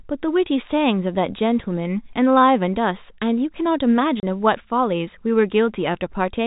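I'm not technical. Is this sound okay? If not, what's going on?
No. At 4.20 seconds the speech drops out for 30 ms. This is packet loss filled with silence. A small piece of the sound went missing in transit and was replaced by a gap. The brief hole fits a single lost packet, and its sharp edges may click.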